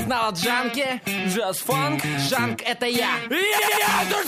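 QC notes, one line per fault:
3.58–3.86 s, repeated frames: a roughly 93 ms chunk plays three extra times, a stutter, adding about 0.28 s.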